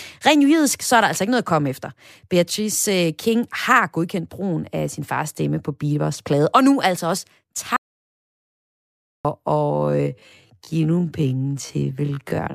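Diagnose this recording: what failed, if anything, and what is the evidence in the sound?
At 7.76 s, right after "og nu altså også", the speech cuts to dead silence until 9.25 s. That is about 1.48 s with no room tone at all. This is an audio dropout to silence. The likely cause is a lost input link while the recorder kept writing silence.

From 9.55 s to 12.55 s the pace suddenly drops to about 0.54 times normal speed, but the pitch stays unchanged. This is a time-stretched section, likely from processing software repeating short fragments to lengthen the audio.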